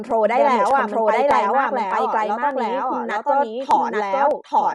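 It's a short speech clip with three separate problems stacked on top of each other. The first is a doubled audio track: the whole signal appears a second time, roughly a second behind and at about the same level, with no reverb tail or room colour on the repeat. It's a clean, full-band duplicate rather than an echo, so it likely comes from the audio being captured twice through a slower path, or from an edit that left two copies out of step. Everything also sounds plainly dull and rough, with nothing at all above 11.5 kHz and a fluttery, noisy texture around the tonal parts. That's the signature of Dolby Digital compression at a starved rate, which fits something like 64 kbps, where the encoder cuts the bandwidth and fills the unfunded frequency lines with dither noise. Finally, there are clock drift buffer slips. From 0.11 s to 4.31 s you get a regular click every 0.6 s, around seven of them. 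Each one is a tiny block of samples, on the order of 15, being dropped or repeated. This is likely two devices running on independent clocks that disagree by several hundred ppm, so the buffer between them creeps until it has to jump.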